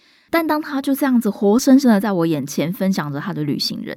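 No technical faults are audible.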